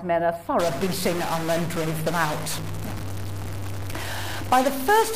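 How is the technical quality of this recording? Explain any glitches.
The technical quality is poor from early on. From 0.6 s to the end, a stuck bit is the likely cause of harsh, buzzy distortion. One bit seems fixed, shifting about half the samples by a step of around -25 dBFS. The waveform shows jagged offset steps, the spectrogram broadband hash, and pauses fill with steady noise.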